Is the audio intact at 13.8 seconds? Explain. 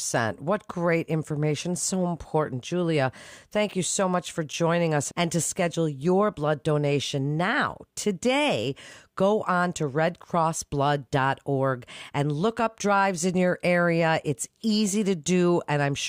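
Yes, the speech at 13.8 seconds plays through cleanly, with no dropout, click, distortion or other fault audible at that point.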